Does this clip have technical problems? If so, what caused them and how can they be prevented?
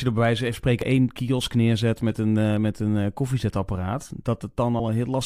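Yes, there's a short burst of damaged data in a compressed stream at 0.82 s, heard as a quick blip in the speech. Corrupted bytes there make the decoder misread the frame and lose sync until it finds the next header. Checksummed transfers and verified file copies would prevent it.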